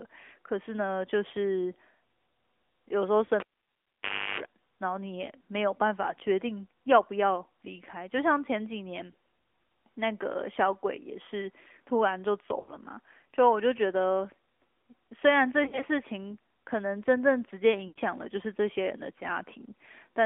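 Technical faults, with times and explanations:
Throughout: AMR narrowband mobile codec. Nothing above 3.4 kHz or below about 300 Hz gets through, so the speech sounds boxed-in and phone-like. The vocal-tract model adds a plainly buzzy, synthetic edge, which fits a mid-rate mode around 10.2 kbps.
3.26–3.30, 9.12–9.14, 12.60–12.74, 15.64–15.85, 17.88–17.98 s: lost AMR speech frames. The decoder covers each gap by replaying the last pitch and vocal-tract settings at falling gain. The first two are single frames and give a brief dip. The later ones lose about 80 ms, so the sound smears, fades, then returns rough. At 15.64 the losses are scattered, with short gaps between them.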